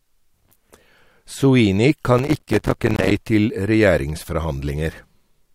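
From 2.19 to 3.11 s a gritty crackle tears through the speech, built from dozens of tiny silent dropouts with hard edges. This is processor overload crackle: the processor repeatedly missed its buffer deadlines, with gap spacing that fits buffers of about 5 ms.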